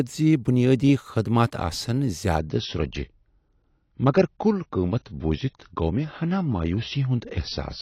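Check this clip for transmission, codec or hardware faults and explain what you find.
One fault is present: the adaptive stream drops to a lower bitrate from 2.39 s to the end of the clip. At that point the speech switches abruptly, with no gap, to a thinner, more processed sound. The player has fallen back to a lower-quality rendition, most plausibly because throughput fell. The codec then discards high-frequency detail to save bits, leaving nothing above about 6.6 kHz, with added swirly artefacts. The band limit and texture fit a low-rate AAC stream of roughly 24 kbit/s.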